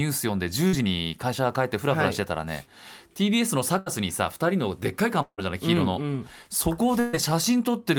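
Speech with three bursts of packet loss, at 0.67–0.75 s, 3.79–3.88 s and 7.00–7.15 s. In each, concealment stretches the last sound into a fading buzz or hiss, and roughly 60 to 140 ms of speech is skipped. At 5.22–5.40 s the concealment fades toward near-silence before the audio resumes about 160 ms further on, which is likely a long network dropout.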